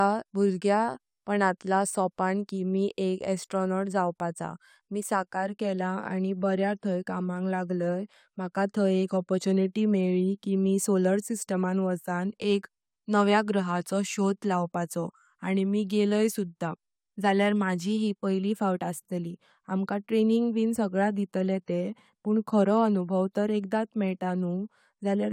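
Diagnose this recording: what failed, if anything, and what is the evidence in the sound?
Nothing failed; no faults found.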